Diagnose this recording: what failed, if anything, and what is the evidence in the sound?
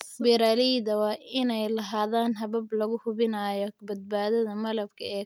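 Nothing failed in this recording.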